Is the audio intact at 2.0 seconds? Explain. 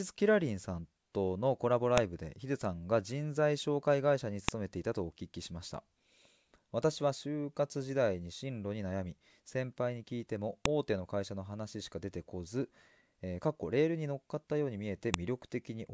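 No. A file header played as audio hits at 1.98 s: header bytes from a joined WAV piece play as samples, giving a sharp, loud click in the speech.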